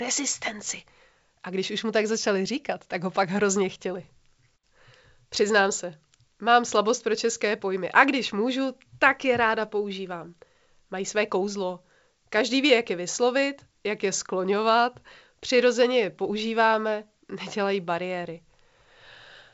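The speech has no technical faults. It has passed through G.722 wideband telephone coding at 64 kbit/s, which can be heard as a band limit with nothing above about 7.7 kHz.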